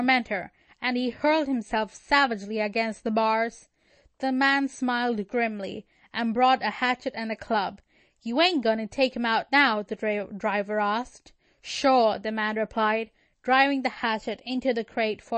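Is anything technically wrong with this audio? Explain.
Yes. MP3 compression runs throughout: nothing sounds above 8.3 kHz, and the speech has a watery, swirly edge, likely from an encoder starved of bits, which fits roughly 32 kbps.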